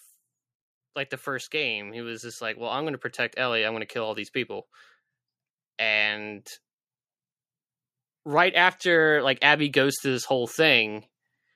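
The automatic gain control judged the input too quiet and pushed its gain up slowly, twice. Just after "like the", from 1.24 to 4.26 s, the level climbs by about 6 dB, and the voice and the background noise swell together rather than the speech alone getting louder. The same automatic gain rise returns from 8.23 to 11.01 s, again by about 6 dB, with the room and the voice lifting as one gradual ramp.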